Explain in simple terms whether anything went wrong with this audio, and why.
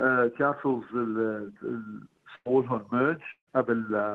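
Around 2.35 to 2.47 s, the sound briefly smears into a held buzz or hiss that fades, then jumps ahead as if a small piece were skipped. This is a burst of packet loss: a handful of the small chunks the audio travels in never arrived in time. The receiving end covered the gap by stretching out the last sound it had and turning it down, and about a tenth of a second of the original is simply gone.

A second, longer break comes at about 3.31 to 3.49 s. Again the last sound is drawn out and fades away, but this time it dies into a short stretch of silence, roughly 70 ms, before the audio picks up again further along. About 0.16 s of the original never comes back. This is most likely a long network dropout, where the connection delivered nothing for a while. The call software filled in what it could and then had nothing left to play.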